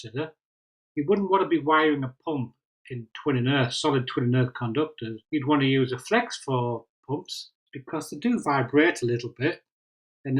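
Nothing technically wrong stands out anywhere in this audio, so there's no fault here to point to.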